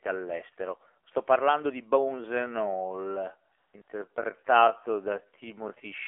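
Throughout, the speech passes through the AMR narrowband mobile codec at 7.4 kbps, squeezing it into a 300 Hz to 3.4 kHz line band, so it sounds plainly buzzy and synthetic. At 1.04 s, just before "parlando di", the phone stopped sending speech frames for 20 ms and AMR comfort noise filled the gap with a brief smooth hiss. From 1.98 s, right after "parlando di", to the end, a time-stretched section plays at 0.616 times speed, likely from pitch-preserving stretching, so the pace drops abruptly and drags while the pitch holds. Comfort noise returns from 3.58 to 3.74 s and 3.82 to 3.88 s, replacing 160 ms and 60 ms of real background with steady synthetic noise that switches in and out.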